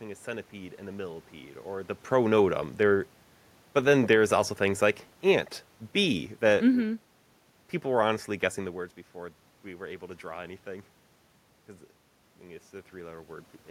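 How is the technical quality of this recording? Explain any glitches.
One glitch affects the recording: an automatic gain drop in the middle of the speech. Automatic gain falling runs from 3.91 to 7.18 s, just before "people were honestly guessing". The gain control judged the input too loud or its background noise too strong and eased its gain down by about 3 dB, so the voice and the room noise behind it sink together. The level shifts around 2 s and 8.5 s come from the talker moving, not from the system.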